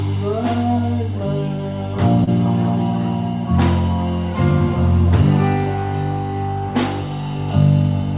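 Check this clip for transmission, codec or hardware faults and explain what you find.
One transmission fault is audible, heard through narrowband call audio with nothing above 4 kHz. From 2.24 to 2.29 s there is short concealed packet loss. About 20 ms never arrived in time, and the receiver extended the preceding sound for 29 ms, leaving a brief smear.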